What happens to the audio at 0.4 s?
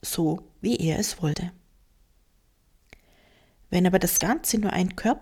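A brief, quiet chirp-like blip cuts into the audio at 0.38 s, peaking at only about -35 dBFS. It is a corrupt frame decoded: bits inside a compressed frame were flipped, yet the decoder played it anyway, so misread codes or gains put energy at frequencies where none belonged. The glitch lasts only as long as the damaged data, and its brevity suggests roughly a couple of frames were hit.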